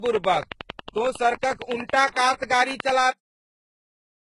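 Throughout the speech, transcoding between lossy codecs colours the sound. Nothing reaches above 11.1 kHz, and smeared, swirly low-bitrate texture sits alongside a second layer of warbling. This is likely a very low-bitrate HE-AAC encode later re-encoded to Vorbis. A single codec would leave one consistent artefact signature rather than two stacked ones.

From 0.06 s to 2.90 s, a train of clicks ticks over the audio. About thirty near-identical pulses arrive at a steady 10.9 per second, peaking roughly 15 dB above the speech. The likely cause is interference or a struggling interface. Their strict regularity, and their persistence through pauses, separate them from random crackle or codec pre-echo, which follows the signal.

At 3.11 s, a cut-off end truncates the clip. The speech stops mid-sound and drops straight to digital silence, which holds to the end. The final buffers were never written. 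Unlike a fade-out or a natural pause, there is no decay tail and no room tone, just an abrupt switch to nothing.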